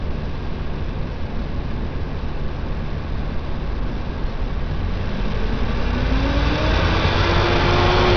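Throughout, nothing above 6.5 kHz survives, and the remaining band is gritty and coarse, consistent with heavy Bluetooth SBC compression at a low bitrate around 64 kbps, likely the cause.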